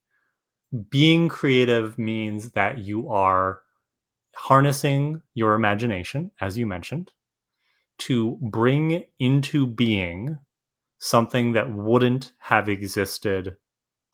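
Listening closely to the speech recording, nothing stood out as a technical problem at any point.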